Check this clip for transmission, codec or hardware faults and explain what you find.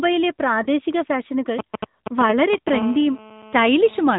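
Three things stand out: the whole clip has gone through the AMR narrowband mobile codec, there's a lost AMR speech frame early on, and GSM signalling bursts buzz through the middle.

The AMR narrowband codec is there from start to finish. AMR-NB samples at 8 kHz and rebuilds speech from a vocal-tract model fed by a handful of pulses, so nothing above 4 kHz survives. The damage is plainly audible: the speech sounds boxed-in, buzzy and a bit synthetic. That fits one of the higher AMR modes, around 10 kbps.

The lost AMR speech frame comes at 0.64 to 0.68 s. It sounds like a single frame failed its checksum over the radio link. The decoder papered over the gap by reusing the previous pitch and vocal-tract settings at reduced gain. You hear a brief dip or warble, and the speech comes back weak or rough for a moment before settling.

The GSM signalling bursts run from 1.59 to 2.70 s. A nearby 2G phone was sending short groups of radio bursts, and the audio circuitry rectified them into sound. 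The result is that galloping dit-dit-dit pattern of short buzzes at 217 Hz. It sits only a little below the speech level, so it's hard to miss while it lasts.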